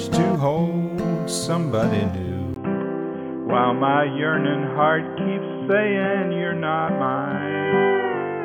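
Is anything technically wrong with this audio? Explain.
Yes. At 2.54 s, after a brief dropout of about 20 ms, the sound turns dull and boxy, with nothing above 3.3 kHz, faint new background noise and no level jump, likely an input switched to a poorer device.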